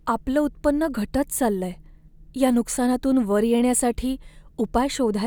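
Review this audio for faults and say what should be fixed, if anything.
Nothing to fix: no faults are audible anywhere in the speech.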